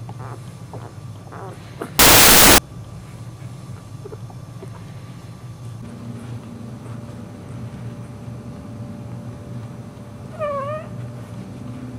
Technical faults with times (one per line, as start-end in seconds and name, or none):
1.99-2.58 samples built from the wrong bytes